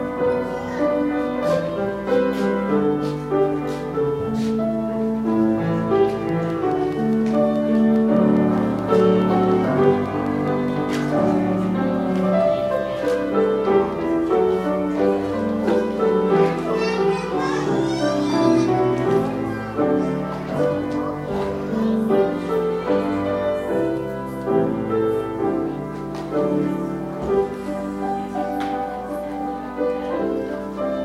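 From 6.29 s to 11.33 s a train of clicks sits over the sound: around thirty near-identical pulses at a steady 4.8 per second, peaking at roughly the signal's own level and heard as regular ticking. The likely cause is nearby interference or a faulty connection or power supply injecting pulses.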